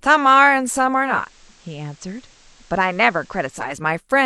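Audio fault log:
0.95–3.86 s digital radio blending to analogue: 400 ms crossfade to FM adds hiss roughly 30 dB down, drops level about 2 dB, then fades back, unlike an abrupt dropout.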